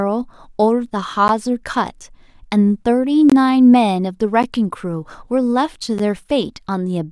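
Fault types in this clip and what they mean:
Block of digital silence: the speech drops out, three 11 ms gaps and one 21 ms gap cut straight to silence and back with no fade, which fits output buffers of 256 and 512 samples left unfilled.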